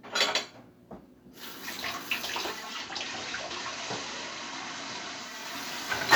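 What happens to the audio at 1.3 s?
Nothing goes wrong at 1.3 s; the sound carries on intact through that moment, with no dropout, click, glitch or change in level or tone.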